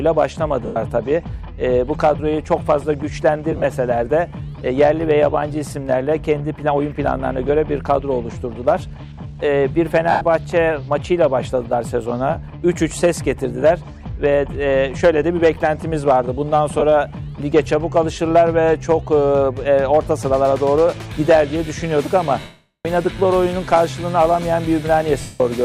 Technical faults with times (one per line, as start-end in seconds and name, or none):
0.66-0.76 lost LE Audio frames
3.52-3.64 lost LE Audio frames
10.11-10.21 lost LE Audio frames
16.79-16.82 lost LE Audio frames
22.40-22.85 lost LE Audio frames
25.21-25.40 lost LE Audio frames